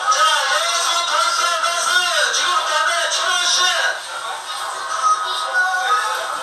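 No technical faults can be heard in this audio.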